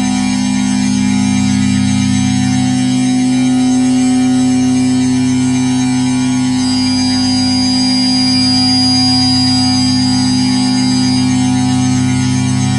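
From 6.53 s to 11.34 s a feedback whistle sits under the sound: a thin, steady 4.9 kHz tone a few dB below the main signal, swelling and fading slowly in level. The likely cause is a loudspeaker-to-microphone loop held just at the edge of oscillation.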